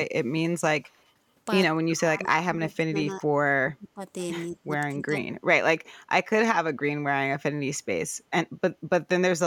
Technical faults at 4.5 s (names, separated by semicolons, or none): speech suppressed in double talk